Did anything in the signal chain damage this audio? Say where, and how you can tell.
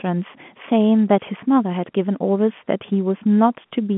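No, no stage in the chain damaged this speech. What can be heard is G.711 telephone coding working as designed: the sound is confined to a line band of roughly 150 Hz to 3.4 kHz, consistent with A-law coding at 64 kbps, with at most a faint quantisation hiss riding under the level.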